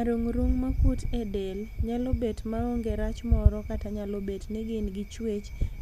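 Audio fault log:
No faults heard.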